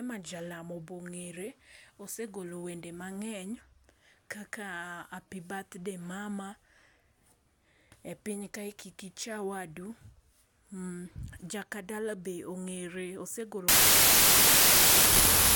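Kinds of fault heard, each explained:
Wrong sample width: from 13.68 s to the end, 32-bit samples appear read as packed 24-bit, giving loud noise over buried speech slowed to 0.75 speed.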